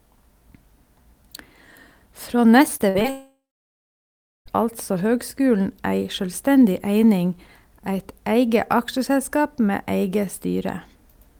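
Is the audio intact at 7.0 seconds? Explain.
Yes, the speech at 7.0 seconds is intact, with no dropout, click, distortion or other fault at that moment.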